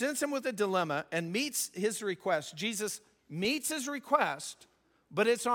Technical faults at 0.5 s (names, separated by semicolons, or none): none